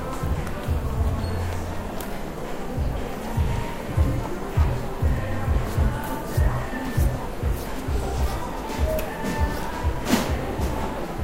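Nothing stood out as a technical fault on listening to these everyday sounds.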